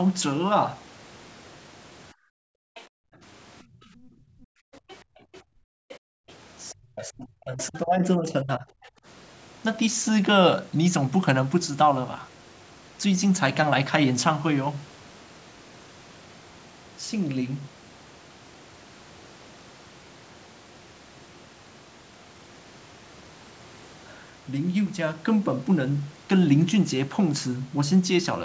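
A speech recording passed through call microphone processing, with nothing above 8 kHz. From 2.13 to 6.28 s the room background dips in and out for about three seconds in total, by up to about 40 dB. A brief dip of about 18 dB follows at 8.94 to 9.05 s. This is background gated by the echo canceller, clamping the microphone while its loudspeaker played. A faint second voice comes through at 2.75 to 2.82 s, 4.75 to 6.72 s, 7.61 to 7.79 s and 8.49 to 8.89 s, roughly 20 to 25 dB below the talker. That is likely the other side's voice leaking through from the loudspeaker. From 6.72 to 8.66 s the talker's own speech drops by up to about 40 dB, in pieces lasting about a second and a half in total. This is likely speech suppressed in double talk, with both sides talking at once.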